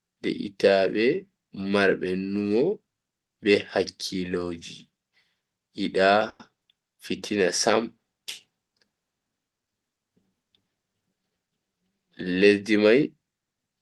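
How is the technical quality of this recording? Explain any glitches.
The recording has one glitch, a call audio freeze, heard over speech that is band-limited to about 12 kHz, which fits an Opus call at around 32 kbps.

From 6.29 to 6.41 s the sound stalls. For about 100 ms the last sound is stretched into a fading buzz, followed by 20 ms of silence. The likely cause is delayed packets draining the jitter buffer. Speech then resumes where it stopped, so nothing is lost, but everything after it arrives 100 ms later.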